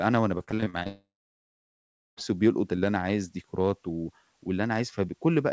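From 0.38 to 0.87 s, the speech turns choppy. This is repeated packet loss. Short holes, the longest about 41 ms, are patched by stretching the last sound.

From 0.87 to 2.19 s, a long network dropout is the likely cause. A brief fading buzz or hiss is followed by about 1.1 s of silence, and that audio never returns.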